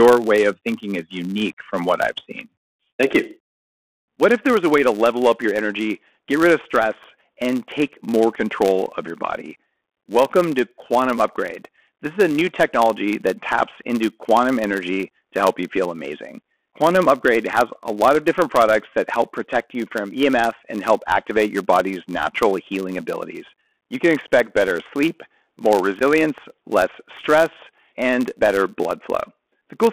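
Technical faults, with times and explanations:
Throughout: Bluetooth CVSD headset codec. The sound is squeezed into a phone band of roughly 250 Hz to 3.4 kHz, with a granular hiss underneath and scratchy, distorted sibilants where loud high content outruns the one-bit delta modulator's adapting step size. This fits a 64 kbps CVSD link.
Throughout: Filter restarted on every block. A 100 Hz buzz rides along with the speech because the filter discards its state at each block boundary and restarts from silence. Each block therefore opens with a small transient, and these repeat at the block rate and rise and fall with level.
26.00–26.02 s: Unconcealed Bluetooth headset packet loss. Just after "expect better sleep more", about 11 ms of audio, likely about three lost packets, drops out with abrupt edges, leaving a brief hole before the speech resumes, momentarily quieter as the CVSD step size recovers.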